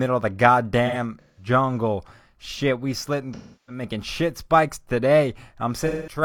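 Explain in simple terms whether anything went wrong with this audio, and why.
AAC frame loss with concealment: pieces of the compressed audio went missing, and the decoder filled the gaps by guessing from the last good sound. The speech turns smeared and hazy at 0.86–1.48 s after "of the", at 3.35–3.83 s between "we slitting" and "shit spikes", and at 5.86–6.22 s.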